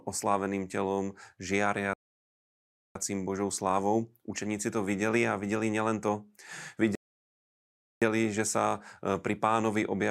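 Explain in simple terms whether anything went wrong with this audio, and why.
The speech stops dead twice, at 1.94 s for about 1.0 s and at 6.95 s for about 1.1 s, then carries on exactly where it left off, the second time with "že sa". These are rebuffering stalls: the player ran out of downloaded audio and waited for more, adding time without losing any.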